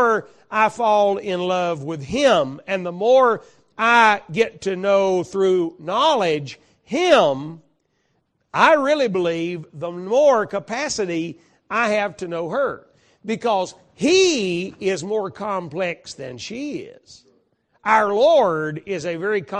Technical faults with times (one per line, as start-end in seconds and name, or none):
0.00-19.59 MP2 compression